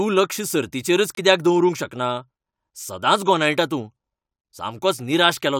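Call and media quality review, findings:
Corrupt frame muted, 1.15 to 1.19 s: abrupt hole of true silence, about 40 ms, within speech. Probable component: decoder and player. Damaged compressed frames rejected, silence substituted, consistent with four frames of roughly 10 ms each. Differs from concealment (no smeared fill) and from buffer dropout (timing kept, no shift afterward).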